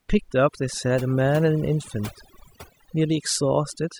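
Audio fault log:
Throughout: overdone noise removal. The noise reduction was pushed too hard on this speech, so frequency bands close to the estimated noise floor are pulled far down or cut out entirely. Quiet parts of the voice are lost along with the noise, leaving near-silent gaps flecked with twinkling specks.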